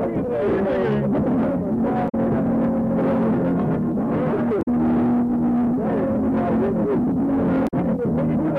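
The audio is broken three times by damaged data in a compressed stream, each burst lasting about 0.1 s: at 2.05 to 2.15 s, 4.59 to 4.68 s and 7.64 to 7.74 s. Corrupt bytes make the decoder misread frames and lose sync until it finds the next frame header, so each event sounds like a short chirp, squawk, click or hole. A simple dropout would leave silence, and a lone click would be far shorter than these bursts.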